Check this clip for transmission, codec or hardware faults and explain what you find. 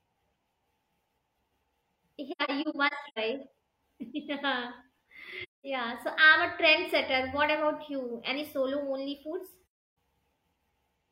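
AAC frame loss with muting affects the speech three times. Between 2.31 and 3.19 s, scattered frames went missing and the decoder zeroed their spectrum, leaving about 0.34 s of silence in short gaps, the longest about a tenth of a second. Further holes fall at 5.43 to 5.65 s and 9.62 to 9.96 s. Because overlapping windows fade the sound out and back in, each dropout is a soft-edged hole.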